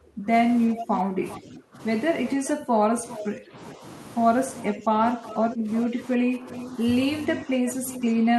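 From the start at 0 s to the end of the clip, the speech keeps dipping and thinning, losing level by up to around 15 dB and at times dropping out in pieces. The likely cause is speech suppressed in double talk: with both ends talking at once, the echo canceller could not tell this talker from loudspeaker echo and pulled both down. Unlike a network dropout, the loss follows the other side's activity and fades in level and treble rather than cutting out cleanly.

Echo leak appears at 1.30 to 1.36 s and 3.09 to 3.23 s as brief scraps about 396 ms behind the original, roughly 20 and then about 15 dB below it. From 4.59 s to the end, it becomes a sustained delayed copy, about 368 ms late and around 15 dB down. The likely cause is a loudspeaker on one side whose canceller let part of its microphone pickup return. The repeat arrives a clearly separate fraction of a second late, unlike room reverb, which blends into the voice.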